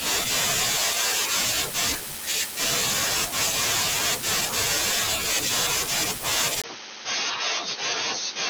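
From 6.62 s to the end, the speech turns abruptly duller and narrower, with nothing above 6.4 kHz, a brief 20 ms gap at the change and a new noise floor well below the speech, at roughly unchanged level, likely an input switched to a poorer device mid-recording.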